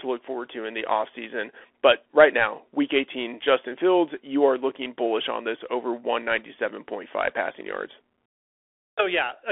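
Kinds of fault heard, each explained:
Bluetooth CVSD headset codec: the speech is squeezed into a telephone band of roughly 300 Hz to 3.5 kHz, and the one-bit up-or-down coding, which fits the 64 kbps headset link, leaves plainly audible damage: scratchy s sounds, a granular hiss underneath, and roughness on loud bright bits.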